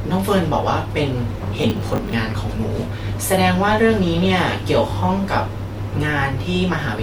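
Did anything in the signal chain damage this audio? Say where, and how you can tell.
Yes. Processor overload crackle damages the speech from 1.57 to 2.13 s. The stage is the driver or buffer. A gritty, tearing crackle rides on the voice for about half a second, then stops cleanly. The processor kept missing its deadlines for the small audio buffers, around fifteen over that stretch. Each miss replayed a scrap of old audio with hard edges. The texture fits buffers of roughly 10 ms.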